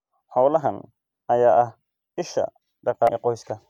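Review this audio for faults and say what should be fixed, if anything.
Damaged data in a compressed stream at 3.05 to 3.09 s: corrupted frames make the decoder lose sync, producing a brief glitch. Prevent it with checksummed, error-protected transport and storage.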